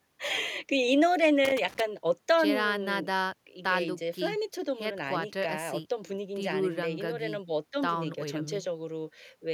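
Loose connector crackle runs from 1.45 to 1.80 s, an irregular burst of scratchy crackle over the speech lasting about a third of a second. A worn or dirty contact somewhere in the signal chain was shifting and repeatedly losing and regaining its connection, so the audio was chopped on and off in rapid, uneven fragments. Each break and reconnection leaves a tiny discontinuity, and together they produce the rough, granular texture heard in that window.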